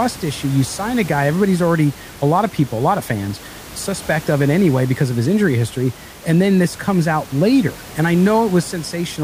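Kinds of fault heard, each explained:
Nothing faulty is audible anywhere in this speech.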